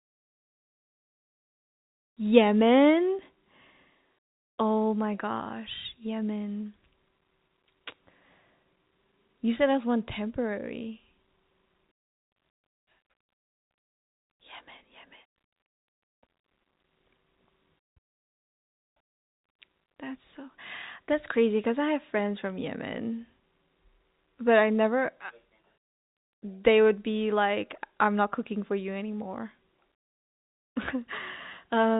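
Nothing stood out on listening to this telephone-band speech, whose G.711 coding leaves nothing above 3.8 kHz.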